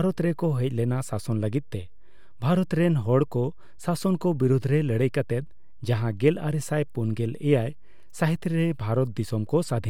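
Speech, with a DC offset present for the whole clip: the waveform sits shifted off zero by a constant of about -38 dBFS. It isn't heard as a tone, but it eats a little headroom and appears as steady energy at 0 Hz.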